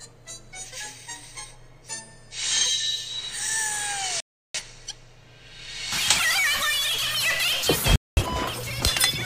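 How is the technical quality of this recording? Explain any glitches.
The recording has three glitches: one burst of crackle and two dropouts.

From 3.73 to 3.81 s there is loose connector crackle. A worn or dirty contact is briefly making and breaking, chopping the signal. The result is a short, irregular scratch of crackle lasting about 80 ms.

Digital broadcast dropouts occur from 4.20 to 4.60 s and from 7.96 to 8.22 s. The receiver stopped getting usable frames and muted until clean data returned. The sound drops to silence, then resumes further along. The lost stretches fit roughly eight and five missing frames.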